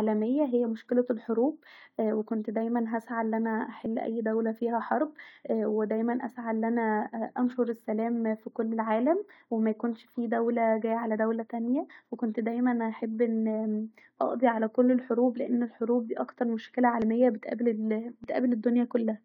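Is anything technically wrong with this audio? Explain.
Yes. At 17.02 s, just after "الحروب ديه اكتر مشكله", and again at 18.24 s, just after "بتقابل ال ااا", the speech jumps ahead with no gap, losing about 70 ms each time. This is likely a dropped buffer (overrun): samples weren't read before the hardware overwrote them, so the surviving audio is spliced end to end. Unlike a dropout, no silence is inserted; the sound simply skips forward.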